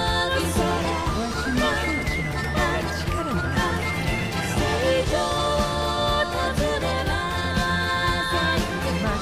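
No faults turn up anywhere in the recording, with nothing audible that points to a problem in capture, processing or playback.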